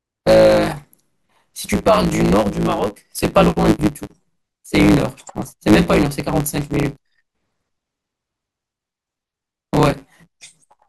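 Throughout the clip, a block size mismatch (truncated) occurs: one stage hands over longer blocks than the next stage reads, so each block's tail is discarded, which fits 512-sample blocks. The speech runs 1.16 times fast at roughly normal pitch, with a steady 109 Hz buzz at the block rate.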